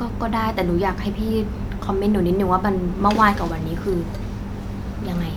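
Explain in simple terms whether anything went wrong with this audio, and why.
Nothing went wrong with this speech recording, as there is no fault to be heard anywhere in it.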